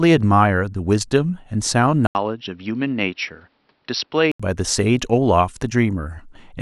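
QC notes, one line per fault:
2.07–4.40 s, input switched to a poorer device: after a brief 80 ms gap the speech turns dull and boxy, with nothing above 5.7 kHz, a little quieter, with a faint new noise floor, until 4.40 s. Likely a change to a narrower-band microphone.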